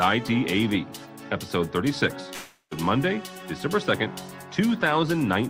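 At 2.33 s the audio breaks off and is replaced by a buzzy, hissing continuation of the last sound that fades over roughly 0.38 s, followed by about 60 ms of near silence. At 2.73 s the audio resumes, but the roughly 0.38 s in between is simply gone. This is likely a long network dropout: the stream stopped arriving, so the receiver stretched out what it last had until that ran thin and then fell silent.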